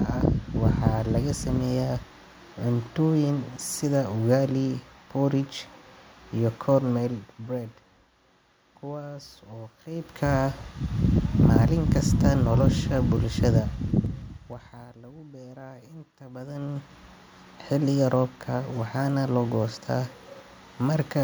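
Zipper noise at 13.51 to 14.95 s, just before "lagu bera inta": the level drops about 20 dB in unsmoothed 2 dB steps, roughly seven per second, each step ticking audibly. Zipper noise again at 16.30 to 16.95 s, right after "lagu bera inta", as the level climbs back about 20 dB in faster 2 dB steps, roughly fifteen per second, giving a quicker zipping.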